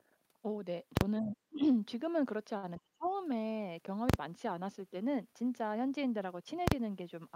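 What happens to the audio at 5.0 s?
At 5.0 s the speech continues intact, with no dropout, click, distortion or other fault at that point.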